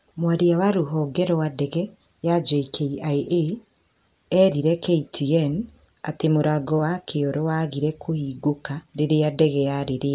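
No audible technical faults.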